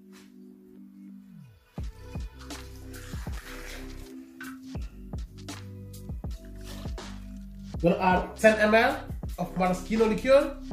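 At 3.32 to 3.48 s a worn or dirty contact in the signal path briefly makes and breaks, a loose connector crackle. The signal is chopped on and off many times within that sixth of a second, heard as an irregular burst of scratchy crackle.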